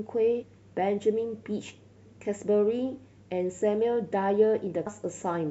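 Right at 0.42 to 0.44 s, and again briefly at about 4.86 s, the speech hits damaged data in the compressed stream. Bad bytes make the decoder misread those frames and lose sync, so each spot comes out as a brief glitch in the speech.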